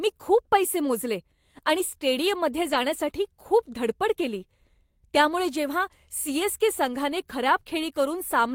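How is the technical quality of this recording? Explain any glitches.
One short glitch stands out in this speech recording, a lost packet rebuilt from error correction at 2.69 to 2.75 s, right after "पैसे मोजले आणि स्टेडियममध्ये". About 40 ms of audio were rebuilt, which fits two separate 20 ms packets going missing. The packets that followed each carried a low-bitrate backup copy, and the decoder played those copies in place of the originals. That leaves no gap, but the patched stretch sounds briefly rougher and noisier than the audio around it.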